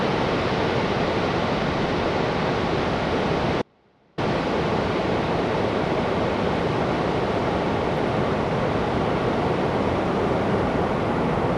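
The signal path likely lost its feed briefly while staying live, causing an audio dropout to a faint residue from 3.62 to 4.18 s: the audio abruptly drops to a faint leak far below its normal level.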